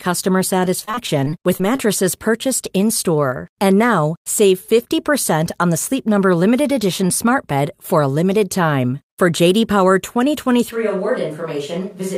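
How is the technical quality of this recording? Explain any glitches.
Two distinct glitches affect the recording. From 0.79 to 1.80 s the sound turns choppy and robotic. This is repeated packet loss: ten short gaps, none longer than 23 ms, each patched by stretching the preceding sound.

From 10.73 s to the end, the sound abruptly becomes roomy, hollow and thinner, about 5 dB quieter, with room noise newly audible. This is most likely a switch to a distant microphone after the close one dropped out.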